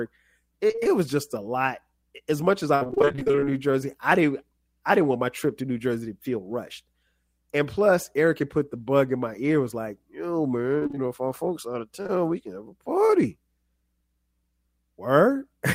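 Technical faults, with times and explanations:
0.67–0.87 s, 2.75–3.52 s and 10.79–10.98 s, repeated packet loss (robotic sound): packets keep dropping, about half of each stretch gets patched by extending the last sound, so the speech goes choppy with pieces missing. The longest run starts right after "much as" and has gaps up to 57 ms. The last one ends just before "know if our folks".
12.02–12.10 s and 13.06–13.11 s, short concealed packet loss: roughly 20 ms holes, two back to back between "our folks out of" and "we can have a", then one more. The receiver fills each by continuing the previous sound, leaving a brief smear or wobble.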